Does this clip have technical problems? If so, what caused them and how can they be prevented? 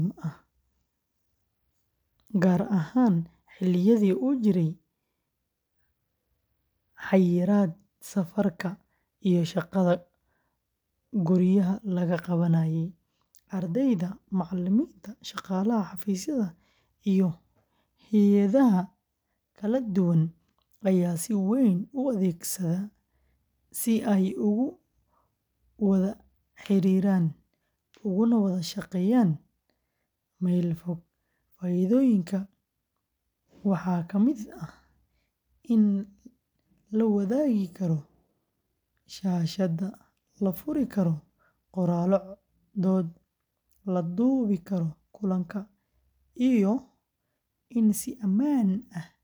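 No, there are no technical problems to prevent here.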